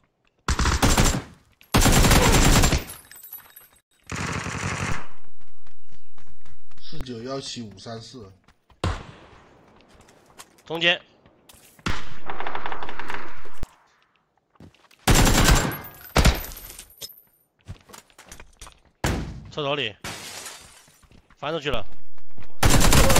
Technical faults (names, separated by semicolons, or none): DC step